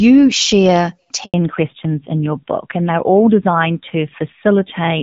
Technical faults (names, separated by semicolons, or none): handover gap; fallback to narrowband